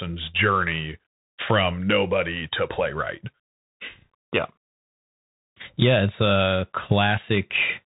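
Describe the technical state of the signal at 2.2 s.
At 2.2 s, as throughout, the Bluetooth CVSD headset codec's one-bit, adaptive-step coding removes everything above 3.8 kHz, leaving scratchy s sounds over granular hiss.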